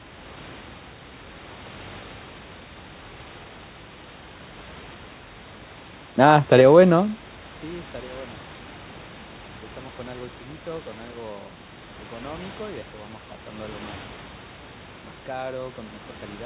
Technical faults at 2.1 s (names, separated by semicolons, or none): none